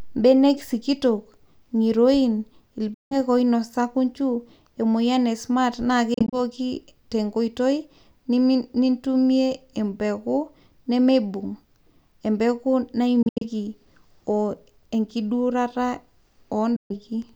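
Speech cuts to silence at 2.94–3.16 s, 6.14–6.40 s, 13.22–13.42 s and 16.76–16.93 s, likely a Bluetooth dropout. The middle two are clusters of short gaps. Unlike a pause, the speech resumes further on, so material is missing rather than delayed.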